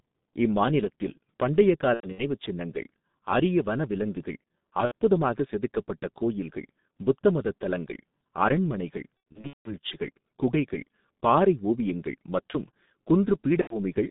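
The whole clip has been squeezed through the G.723.1 codec at about 6.3 kbit/s, with a line band of roughly 150 Hz to 3.7 kHz. Its coarse 30 ms frames and slow voice model leave the speech muffled and hoarse, with smeared consonants.

VoIP packet loss concealed by the speech codec follows at 1.94 to 2.23 s, between "இம்மாநிலத்தில் பண்டைய" and "சின்னங்கள் அரிய வனவிலங்குகள்". There, about 150 ms went missing, scattered over 240 ms, with the longest gap 90 ms. It recurs at 4.85 to 4.92 s (60 ms, before "செதுக்கப்பட்ட கோயில்கள் புத்த மதத்"). It recurs again at 9.32 to 9.76 s after "புத்த மதத் தலங்கள் அரண்மனைகள்", where 330 ms was lost across 480 ms and the longest gap was 180 ms. The last is at 13.61 to 13.79 s (90 ms). Each time the decoder stretches its last pitch and filter into a fading buzz or coloured noise, and the voice recovers only sluggishly.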